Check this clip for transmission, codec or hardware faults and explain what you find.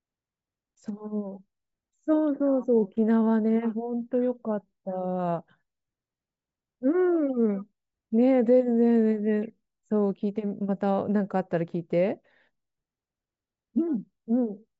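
No faults are audible.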